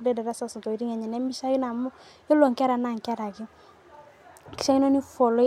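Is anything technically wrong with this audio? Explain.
No, nothing technically wrong can be heard in this speech recording. No fault turns up at any point in the clip.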